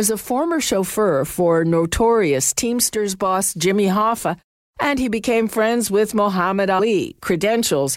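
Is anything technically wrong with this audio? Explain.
Yes. At about 6.78 s the speech jumps forward, losing roughly a tenth of a second of sound. This is compressed frames skipped: whole frames of the coded audio never reach the output, either missing from the file or rejected by the decoder as damaged, so playback resumes further on.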